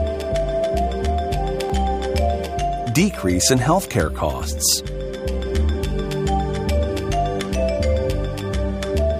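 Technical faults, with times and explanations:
1.70 s, overlap between stream segments: two segments' time stamps overlapped, so the player discarded 13 ms of audio, leaving a tiny skip where the waveform jumps.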